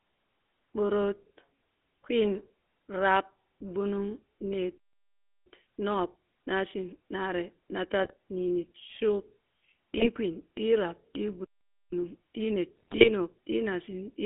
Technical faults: GSM full-rate codec; playback stall; GSM bit errors; time-compressed catch-up

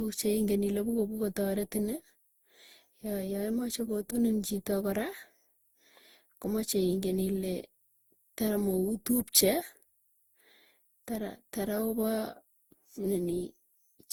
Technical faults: generation loss

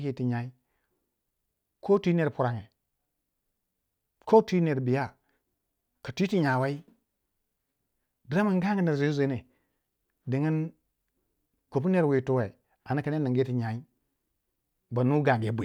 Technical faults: none

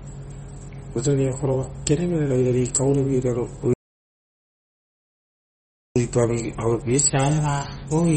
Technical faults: MP3 compression; audio dropout to silence

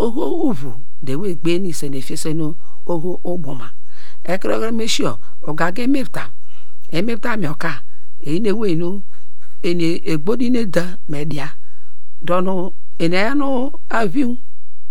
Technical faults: DC offset

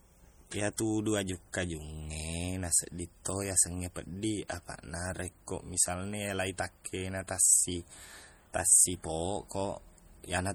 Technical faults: MP3 compression

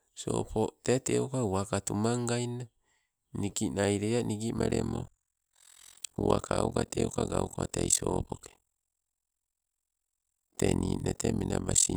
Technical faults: overlap-add ripple

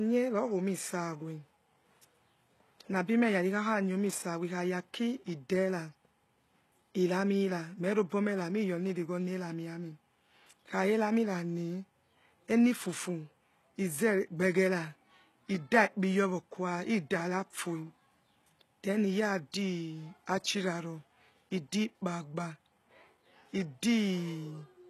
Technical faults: HE-AAC compression; pre-echo

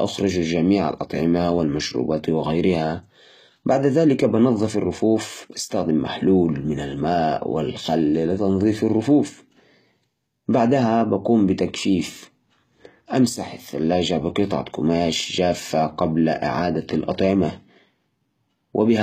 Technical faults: HE-AAC compression

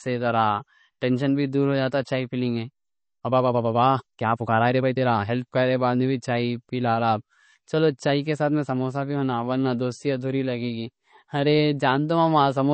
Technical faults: low-bitrate audio saved at a high bitrate; time-stretched section

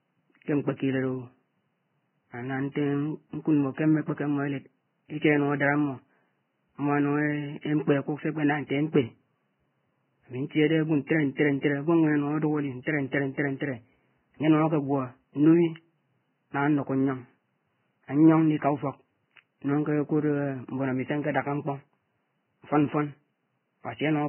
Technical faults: Vorbis compression; pre-echo

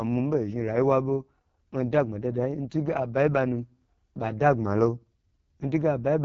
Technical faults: AMR wideband (HD Voice) codec

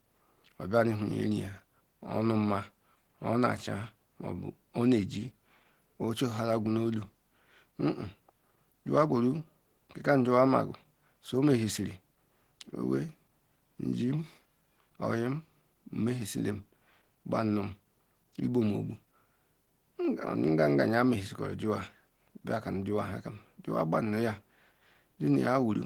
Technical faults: Opus compression

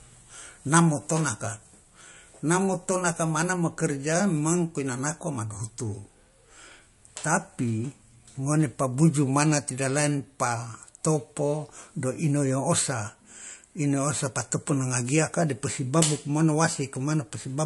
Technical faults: low-bitrate audio saved at a high bitrate

